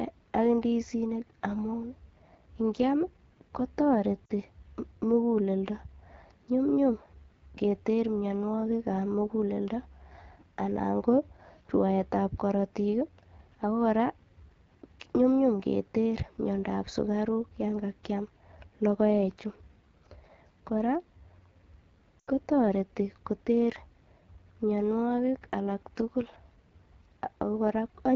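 A speech recording carried over the AMR wideband (HD Voice) codec, and the codec damage is plainly audible throughout. The sound is rough and raspy, which fits the 8.85 kbit/s mode, one of the two lowest rates, where the pulse-driven vocal tract model has too few bits to shape each frame. The harshness follows the speech itself rather than sitting underneath it as a constant hiss, and the top band up to 7 kHz carries synthetic noise instead of real detail. That separates it from narrowband coding, which would sound dull and boxy. Lost AMR speech frames break in twice. At 4.26 to 4.32 s there is a 40 ms disturbance, consistent with two frames failing their checksum. At 22.19 to 22.29 s an 80 ms loss ends just before "ko toreti koter", which fits a run of four frames. In both places the decoder reuses the last good pitch and vocal tract settings with falling gain, so the sound smears and sags rather than cutting off abruptly the way a plain dropout or clipped gap would. 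The longer event fades further before the speech returns briefly weak or rough.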